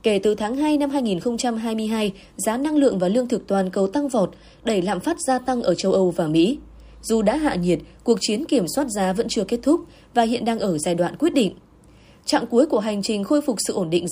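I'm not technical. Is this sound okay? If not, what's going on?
Yes, it sounds fine; there's nothing here that stands out as a problem, so you can relax about it.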